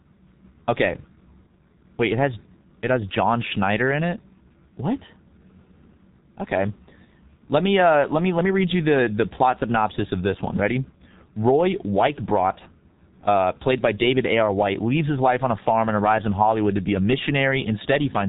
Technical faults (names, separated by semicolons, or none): G.723.1 codec